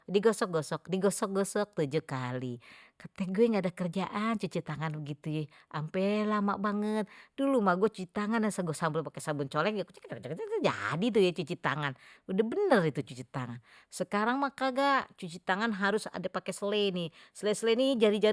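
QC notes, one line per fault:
No faults are audible anywhere in this speech clip.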